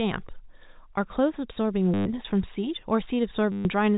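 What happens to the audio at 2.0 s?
Packets went missing from 1.94 to 2.06 s, and the receiver filled the 120 ms gap by replaying the last packet it had, which is packet loss with the last packet repeated. The repeats seldom line up with the pitch, so the speech turns into a brief robotic stutter with a buzz near 100 Hz, which fits 10 ms packets.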